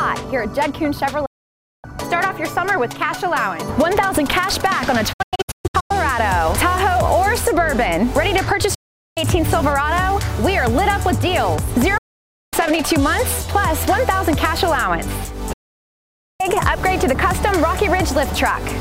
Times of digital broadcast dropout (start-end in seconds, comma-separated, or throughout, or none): 1.25-1.85, 5.13-5.91, 8.74-9.17, 11.97-12.53, 15.53-16.41